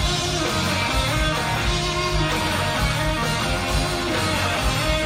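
At 3.22 s the audio jumps forward by about 20 ms where a single compressed frame is skipped, consistent with a 23.2 ms codec frame, leaving an abrupt join.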